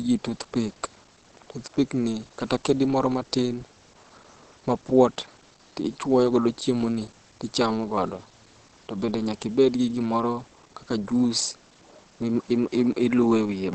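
The clip is speech with Opus compression throughout: nothing reaches above 8.6 kHz, and the voice sounds muffled and hoarse rather than swirly, unlike MP3. That points to Opus's speech (SILK) mode, which it likely switched to at a low bitrate around 16 kbps.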